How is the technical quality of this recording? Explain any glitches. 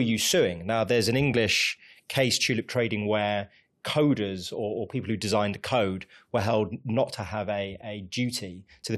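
Nothing stood out on listening to this recording, and there are no glitches to explain.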